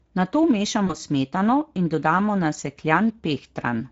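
A speech recording carries the Speex codec throughout, plainly audible as a hoarse, noisy grain on the voice, with any band above 4 kHz sounding like shaped hiss rather than real detail, which points to a mid-quality setting near 16.8 kbps. Unlike MP3-style swirl, the damage sits in the voice's excitation. At 0.87 s comes VoIP packet loss concealed by the speech codec: the sound smears into a stretched, fading extension of the voice that stays weakened until about 0.96 s. That fits one lost 20 ms frame whose concealment lingers, not a clean dropout or click.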